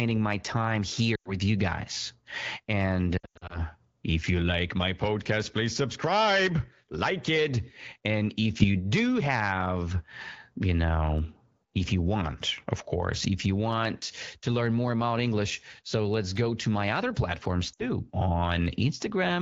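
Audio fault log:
1.15–1.32 s, 3.18–3.59 s, 17.73–17.88 s: lost AMR speech frames. The decoder stretches the last good speech with fading gain, unlike a hard dropout's silence. Heard after "my time", before "if you like my", and after "to my other platforms"; the middle gap is patchy.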